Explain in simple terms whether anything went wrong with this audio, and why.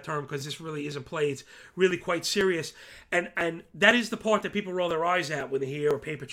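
Periodic USB or driver dropouts: from right after "term because" at 0.41 s to 5.91 s, about a millisecond of speech vanishes every half second, heard as steady ticks.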